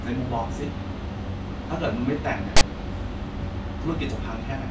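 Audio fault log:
2.57 to 2.61 s, file tags played as audio: a hard-edged burst of static about 45 ms long cuts into the speech, starting and stopping abruptly. A block of text tag data was read as if it were sample values. Because text bytes sit in a narrow range of codes rather than swinging around zero, the result is a loud, coarse rasp pushed off to one side of the waveform, not even noise. The sharp edges mark where the decoder entered and left the tag block.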